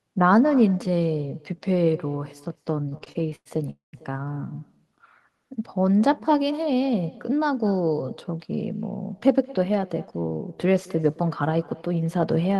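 Speech, with echo with no canceller throughout: the far end's loudspeaker feeds its microphone, so every phrase returns roughly a fifth of a second later, about 22 dB quieter and thinner. Repeated stalls (stutter) from 2.89 to 3.70 s: the jitter buffer ran dry again and again, and the receiver stretched the last sound to cover about 250 ms of waits, the longest around 100 ms. A call audio freeze follows from 3.70 to 3.95 s, about 230 ms of held-over sound with roughly 140 ms fading to silence, likely from packets delayed in transit before playback resumes where it stopped.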